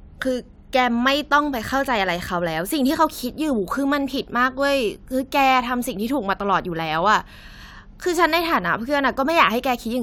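No technical faults are audible.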